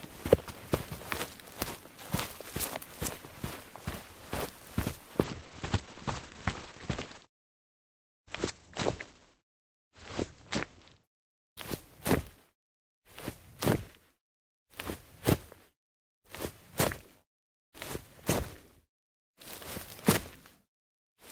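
From 5.25 to 11.61 s, a call bitrate drop to 11 kbps starves the encoder, muffling the sound. The spectrogram goes empty above 8 kHz.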